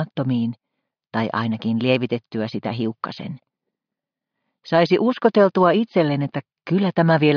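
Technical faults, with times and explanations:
Nothing here stands out as a technical fault, so there's nothing to list.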